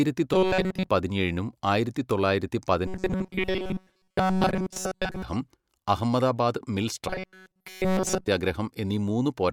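Robotic sound from repeated short buffers affects this speech clip three times: 0.34 to 0.89 s, just before "പതിനേഴിനും ആയിരത്തി തൊള്ളായിരത്തി"; 2.87 to 5.22 s, just after those words; and 7.08 to 8.28 s, after "അഹമ്മദാബാദ് മിൽ". The voice turns into a stiff metallic buzz at 188 Hz. That fits a roughly 5.3 ms chunk of audio being looped, likely because new data arrived too slowly. Most of the first two stretches and all of the last are repeated audio.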